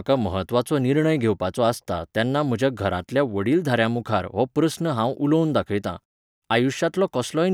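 No technical faults are audible.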